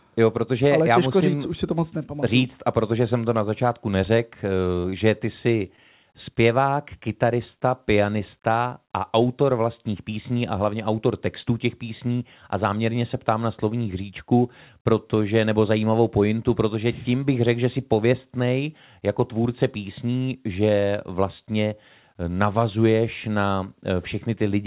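Speech carried over a call link whose band stops at 4 kHz, consistent with G.711 mu-law, shows short concealed packet loss in three places. Two 20 ms gaps at 4.82–4.86 s and 4.90–4.94 s fall after "na začátku neřekl eh". A third at 5.76–5.79 s, after "eh že ty si", had 20 ms missing with about 12 ms synthesised. Each time the receiver extended the preceding sound, leaving a brief smear or wobble before the real audio resumed.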